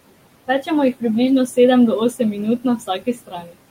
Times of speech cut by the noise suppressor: 2.58-3.55

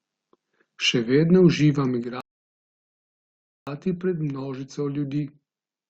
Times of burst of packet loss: none

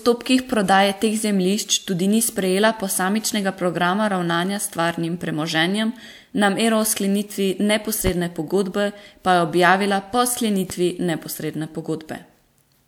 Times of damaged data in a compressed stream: none

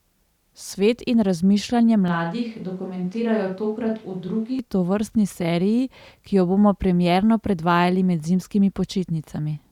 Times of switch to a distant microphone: 2.08-4.59

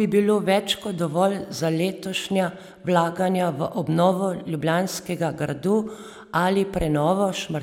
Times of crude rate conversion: none

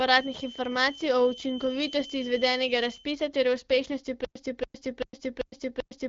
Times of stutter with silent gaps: 4.25-6.09

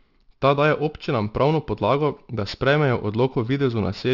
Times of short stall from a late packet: none

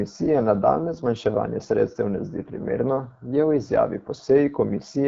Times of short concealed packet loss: none

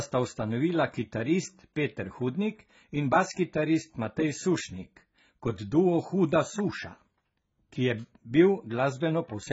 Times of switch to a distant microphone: none

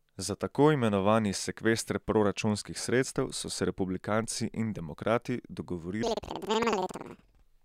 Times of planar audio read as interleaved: 6.03-7.46

